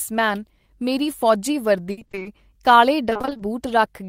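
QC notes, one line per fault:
1.91–2.27 s, repeated packet loss (robotic sound): Just after "ਮੇਰੀ ਫੌਜੀ", the speech breaks eight times. The longest gap is 60 ms. Each hole is filled by extending the last sound. Over half the span is patched, so it turns choppy.
3.09–3.41 s, repeated packet loss (robotic sound): Eight more gaps, none over 20 ms. Together they fill 160 ms, half this stretch, with repeated sound. The rapid patching gives the same choppy stutter.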